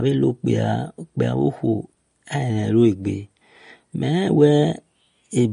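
MP3 compression, throughout: the speech stops dead at 10.6 kHz and sounds plainly watery, which fits a likely 40 kbps encode zeroing weak frequency lines.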